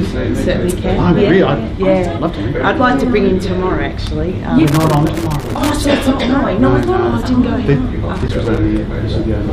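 Two bursts of irregular crackling and scratching break into the audio, from 4.68 to 5.72 s and again from 8.15 to 8.58 s. This is loose connector crackle: a worn or dirty contact making and breaking as it shifts, chopping the signal.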